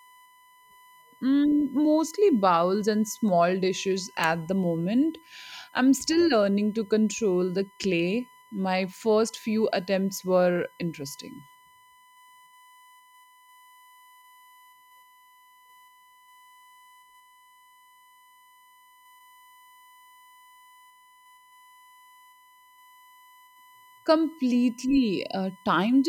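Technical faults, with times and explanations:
Throughout, USB whine: a steady 1 kHz tone sits well below the speech, leaked from USB frame current, drawing an unbroken horizontal line on the spectrogram.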